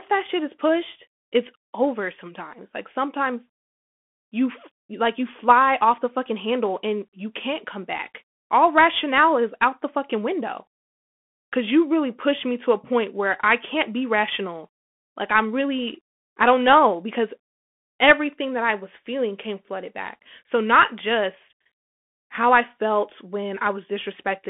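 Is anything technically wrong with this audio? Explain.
Yes. Throughout the speech, the audio carries the sound of a Bluetooth CVSD headset codec. CVSD codes each sample as one bit saying up or down, at a rate that points to a 64 kbps link, with an adapting step size. The band sits at roughly 200 to 3400 Hz, and the damage is plainly audible. S sounds turn scratchy, loud bright sounds distort as they outrun the step, and a granular hiss lies underneath. That grainy slope distortion, not just a narrow band, separates it from a clean telephone band limit.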